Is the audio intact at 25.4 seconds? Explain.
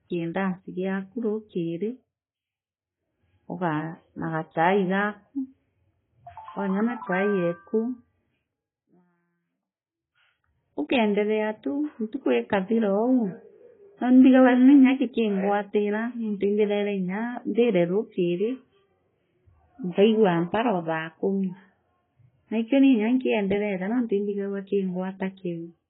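No. At 25.4 seconds, as across the whole clip, the speech carries AAC compression damage. Nothing is present above about 3.8 kHz, so sibilants and consonant detail sound dull and smeared, with a warbling, fizzy texture on sustained sounds. The likely cause is heavy AAC-LC coding at a very low rate, consistent with around 16 kbps. The encoder discards high bands and coarsely quantises the rest against its hearing model.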